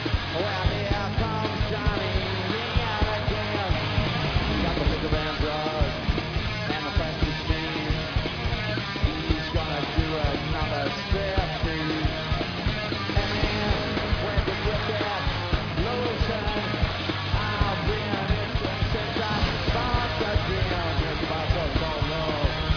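No dropouts, clicks, distortion or timing errors are audible anywhere in the clip.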